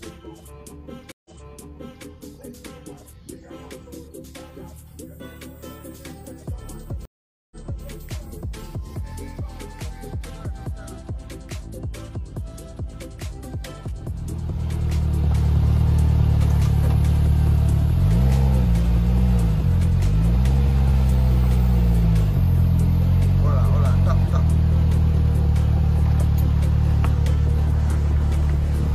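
Stream reconnects at 1.12 s and 7.05 s: after 130 ms and 457 ms of silence, a fresh decoder resumes 789 ms and 325 ms earlier, repeating audio.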